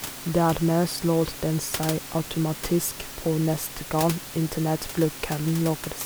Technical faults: none

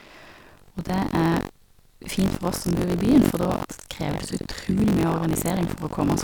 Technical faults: buffer tearing

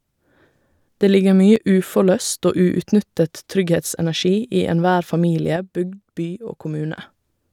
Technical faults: one channel drops out

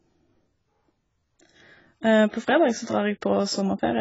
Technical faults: AAC compression; pre-echo

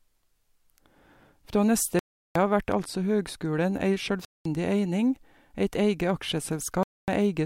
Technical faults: Bluetooth dropout

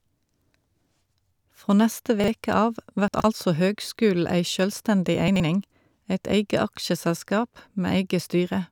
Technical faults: chunks out of order

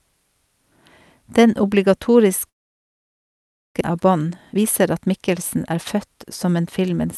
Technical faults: long network dropout; jitter buffer speed-up

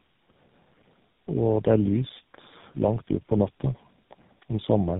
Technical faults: tandem speech coding

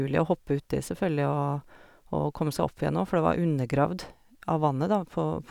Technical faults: none

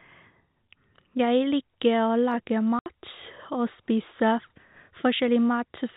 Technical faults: packet loss filled with silence

